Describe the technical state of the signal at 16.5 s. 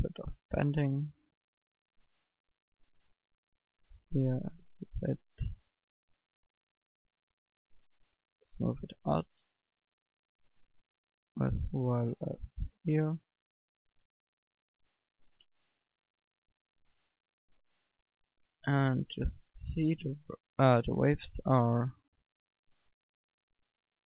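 At 16.5 s the audio is intact, with no dropout, glitch or distortion, only the narrow band that stops at 4 kHz, consistent with a G.711 telephone-grade call path.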